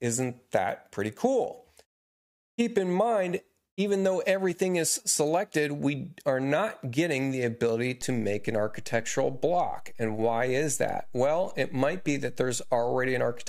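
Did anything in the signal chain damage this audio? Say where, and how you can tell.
Yes. A DC step hits at 8.02 s and holds to the end. The waveform's zero line jumps by about -37 dBFS there, heard as one low thump while the sound carries on unchanged. That points to the converter stage, recalibrating or switching in an input with an offset.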